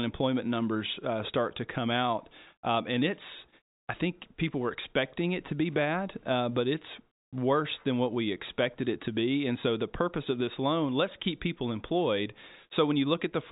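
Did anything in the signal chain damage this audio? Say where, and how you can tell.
No, nothing in the chain damaged this speech; the band stops near 3.8 kHz, which is simply the normal ceiling of G.711 telephone coding and points to an ordinary 64 kbps mu-law path.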